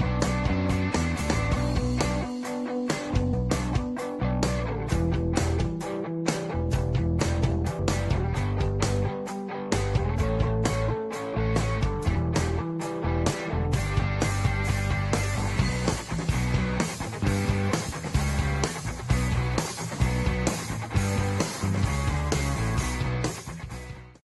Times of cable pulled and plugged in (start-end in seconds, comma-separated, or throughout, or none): none